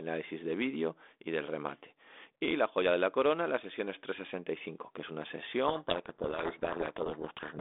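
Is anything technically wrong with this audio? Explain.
Yes. From 5.68 s, just after "que es una", to the end, the speech is buried in harsh, grinding distortion. This is a codec payload misread: the decoder takes each G.726 code word with its bits in the wrong order, so every step it adds to its prediction is wrong and the waveform goes ragged. Before that point the narrow telephone band, about 250 Hz to 3.6 kHz, carries only the light coding hiss that fits 32 kbit/s G.726.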